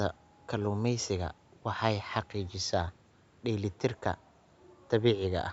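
Nothing here counts as a fault: the speech has simply gone through a call's usual microphone processing, which trims away the lowest bass and leaves no content above 8 kHz, and that's just how call audio sounds.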